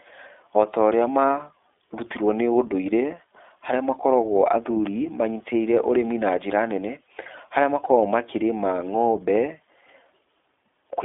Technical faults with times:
0.00-11.05 iLBC codec

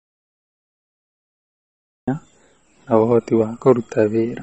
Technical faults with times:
0.00-4.42 MP3 compression
0.00-2.08 audio dropout to silence

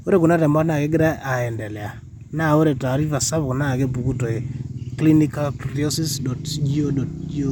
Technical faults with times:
none

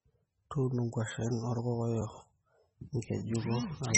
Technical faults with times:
0.00-3.97 MP3 compression
2.97 block of digital silence

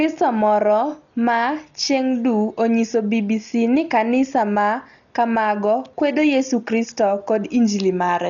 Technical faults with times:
0.00-8.29 Dolby Digital compression

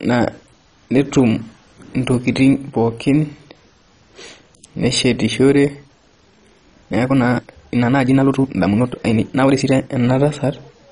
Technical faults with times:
0.00-10.92 MP2 compression
5.85-9.93 time-stretched section

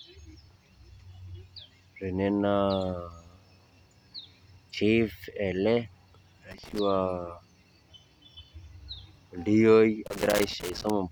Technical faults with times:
6.51-6.79 loose connector crackle
10.06-10.90 loose connector crackle

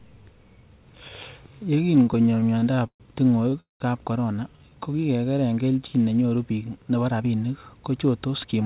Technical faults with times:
1.96-3.02 repeated stalls (stutter)
3.50-3.54 short stall from a late packet
3.60-3.82 call audio freeze
4.51-4.71 jitter buffer slow-down
6.70-7.27 jitter buffer speed-up

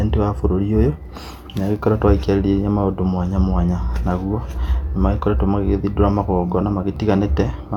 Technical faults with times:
none

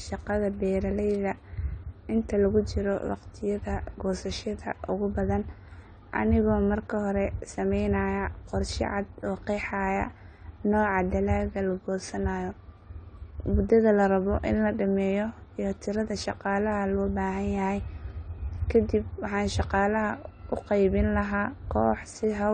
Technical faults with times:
0.00-22.54 AAC compression

